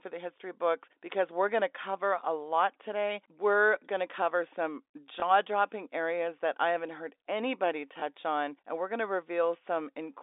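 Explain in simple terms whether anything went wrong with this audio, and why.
Yes, something went wrong twice: packet loss with last packet repeated. At 5.20 to 5.22 s, just after "going to cover some", and at 8.00 to 8.02 s, after "I haven't heard anybody", a short chunk of sound went missing, which fits a single lost 20 ms packet. The receiver filled each gap by replaying the previous bit of sound, so you hear a small blip instead of silence. A plain dropout would leave a brief silent hole.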